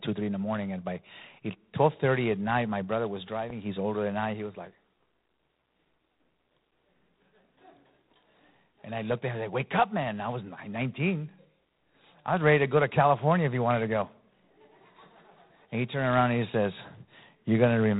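From start to finish the speech carries G.726 ADPCM damage. The codec sends only the difference between each sample and an adaptive prediction, and at the coarseness heard here, which points to the 24 kbit/s mode with three bits per sample, the quantisation error is plainly audible. A harsh, rasping hiss rides on the speech, rising and falling with its level, and the band stops at 3.9 kHz, leaving the voice narrow and telephone-like.

At 3.50 to 3.52 s, right after "night my brother was", a single loud pop cuts in, peaking roughly a few dB above the speech. It is a sharp click lasting about 20 ms, with the speech continuing underneath. The sound fits a brief voltage step or pulse entering the signal path, likely from a plug, switch contact, static discharge or driver glitch, which the downstream circuits then shaped into that short transient.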